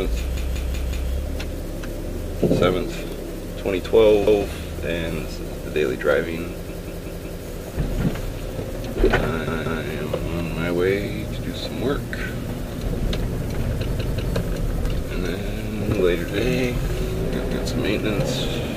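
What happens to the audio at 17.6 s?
A repeated buffer occurs from 17.46 to 17.65 s: fresh audio arrived late, so the last 186 ms block, which fits an 8192-sample buffer, played once more. It sounds like a short stutter. On a spectrogram, two identical adjacent blocks meet at an abrupt vertical seam.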